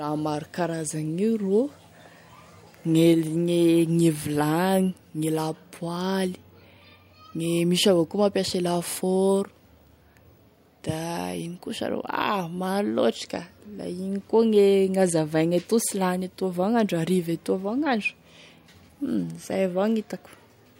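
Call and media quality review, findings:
Nothing to flag on this speech recording; it came through without any audible problems worth a ticket.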